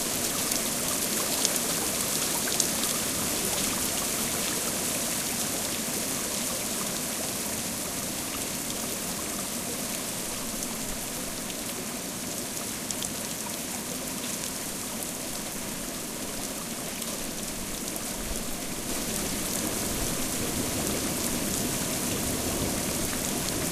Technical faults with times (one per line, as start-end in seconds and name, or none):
18.89-23.72 doubled audio track